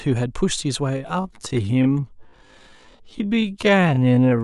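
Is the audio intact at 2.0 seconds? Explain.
No. From 0.89 to 4.43 s the speech drags at about 0.55x speed at unchanged pitch, likely a time-stretched section padded by repeating short slices.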